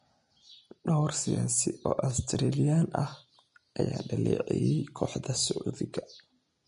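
Throughout, the speech sounds hissy and grainy, with nothing above 10.6 kHz. This is likely Vorbis compression at a low bitrate, which turns fine treble detail into noise.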